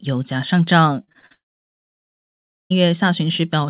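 Speech heard through a narrowband call path with nothing above 4 kHz, which fits G.711 mu-law at 64 kb/s, shows repeated packet loss (robotic sound) from 1.04 to 1.32 s. Around five short holes, the longest about 41 ms, are patched by extending the preceding sound. Concealment covers roughly 43% of that span, so the audio turns choppy with pieces missing. From 1.32 to 2.72 s a long network dropout is the likely cause of about 1.4 s of lost audio. The last sound is stretched into a brief fading buzz or hiss, then roughly 1.3 s of silence follows before the signal resumes without the missing portion.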